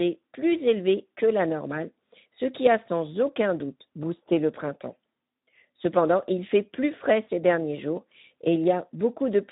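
Throughout this speech recording, a Speex codec at a low bitrate (what is heard fits roughly 11 kbps) starves the CELP excitation of bits, leaving plainly audible coding damage: a noisy, hoarse grain on the voice, with nothing above 3.8 kHz.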